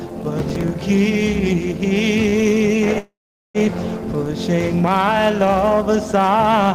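From 0.39 to 0.82 s a processor overload crackle tears through the sound. The system could not finish its audio buffers in time, which fits buffers of around 10 ms, and roughly seven deadlines were missed in close succession. Each miss replayed a fragment of old audio with abrupt edges, so the passage takes on a gritty, crackling texture that clears once the load eases.

At 2.29 s a short stall from a late packet holds the sound for about 29 ms, ending at 2.35 s. The jitter buffer ran dry while waiting for the packet, so the receiver stretched the preceding sound to cover the wait, then resumed at the same point. Nothing is lost, but the moment drags slightly before playback moves on.

From 2.98 to 3.58 s a call audio freeze halts the sound for about 0.56 s. The last sound is carried on briefly as a fading tail, and then roughly 0.42 s of that span is silence before the audio picks up exactly where it stopped. 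The likely cause is packets delayed in transit, emptying the jitter buffer, so the passage is pushed later by that same 0.56 s rather than cut.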